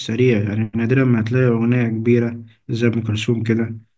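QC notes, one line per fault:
No faults found in the speech. Nothing here calls for a QC entry.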